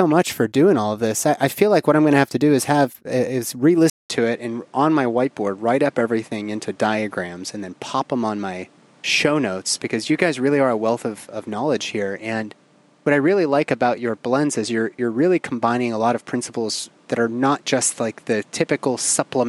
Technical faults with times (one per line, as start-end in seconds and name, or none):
3.90-19.48 input switched to a poorer device